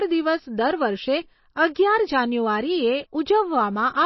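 Throughout, the speech sounds dull and watery, with nothing above 5.8 kHz and swirling, metallic chirps on s sounds. The cause is likely MP3 compression at a bitrate consistent with around 24 kbps: the encoder cuts the treble and zeroes weak frequency lines that flicker between frames.

At 1.74 s, a brief 15 ms hiss comes just before a sharp attack, which sounds soft and smeared. This is pre-echo. The codec spread its quantisation noise across the whole block, so noise sized for the loud onset also filled the quiet moment before it.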